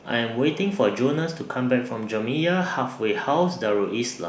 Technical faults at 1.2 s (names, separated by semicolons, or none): none